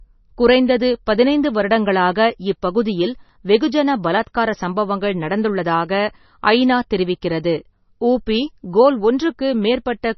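All the way through, the speech sounds watery and swirly with nothing above 6 kHz, likely heavy MP3 compression at around 24 kbps zeroing weak frequency lines frame to frame.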